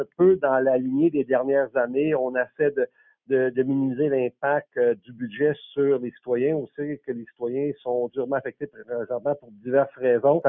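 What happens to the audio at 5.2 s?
At 5.2 s the sound is caught by the noise suppressor. Between 4.96 and 5.22 s the sound is cut by the noise suppressor, dropping by up to about 16 dB, with roughly a third of a second affected in total. The suppressor mistakes this stretch for noise, so it pulls the gain down harder than elsewhere.

That dip sits within a wider fault that runs through the whole clip: a noise suppressor designed for speech was applied to music or sounds. Throughout, its gain swings by roughly 10 dB as it keeps reclassifying held material and tails as noise. Sudden onsets mostly pass, while sustained parts are turned down.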